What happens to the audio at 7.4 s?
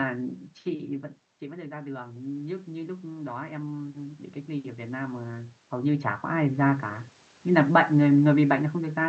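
Nothing goes wrong at 7.4 s; the speech there comes through intact, with no dropout, click or glitch.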